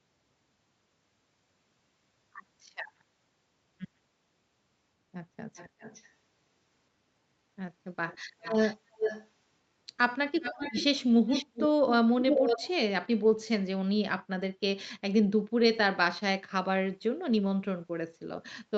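Echo leak at 5.56–6.09, 8.07–8.18, 8.41–8.76, 8.93–9.28, 10.41–11.05, 11.27–11.69 and 12.19–12.69 s: a copy of the speech returns 390 ms late (520 ms in the last), growing from faint to nearly as loud as the speech, likely a loudspeaker echo the canceller failed to remove.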